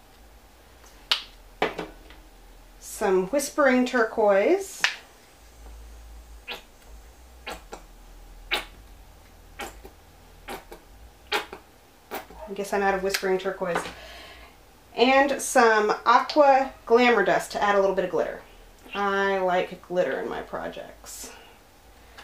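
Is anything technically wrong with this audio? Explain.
No, nothing stood out as technically wrong on listening to this audio.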